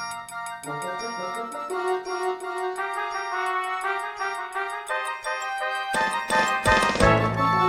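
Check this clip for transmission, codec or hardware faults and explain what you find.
Checking the clip turns up no faults to explain.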